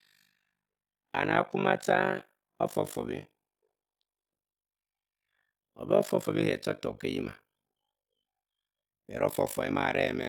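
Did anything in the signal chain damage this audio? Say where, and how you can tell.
Yes: frame-based processing overlapped its windows wrongly, so overlap-add ripple runs throughout, with dips of about 60 dB roughly 50 times a second, heard as robotic flutter.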